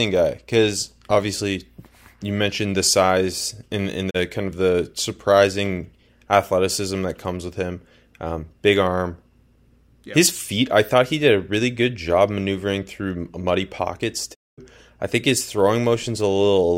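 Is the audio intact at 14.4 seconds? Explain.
No. At 14.4 seconds the speech is inside a digital broadcast dropout running from about 14.33 to 14.60 s, just after "maneuvering through muddy pockets" and before "I think his". The receiver stopped getting valid frames and muted, so the sound fades out over about 20 ms into roughly a quarter-second of silence, which fits several lost frames. Unlike a buffer stall, nothing pauses and resumes: the missing speech is simply gone.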